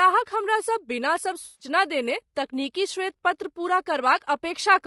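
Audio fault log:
throughout: low-delay AAC compression, likely AAC-ELD at a low rate near 32 kbps; its short frames resolve pitch harmonics poorly, leaving the speech rough and grainy.
1.45–1.67 s: AAC frame loss with concealment; the decoder rebuilt about 140 ms of missing frames from the last good spectrum, producing a brief smeared, noisy, phasey patch.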